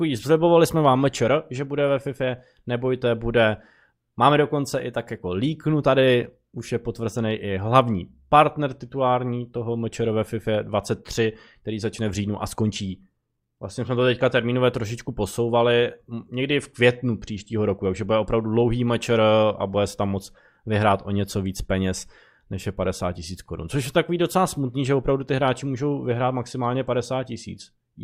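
No technical faults can be heard anywhere in the speech.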